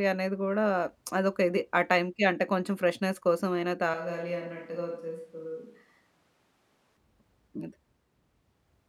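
From 3.94 to 6.97 s speech suddenly turns hollow, about 5 dB quieter over louder room noise, likely a switch to a distant microphone.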